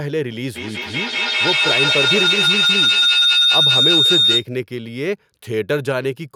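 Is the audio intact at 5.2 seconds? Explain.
Yes, at 5.2 seconds the speech plays through cleanly, with no dropout, click, distortion or other fault to be heard at that moment.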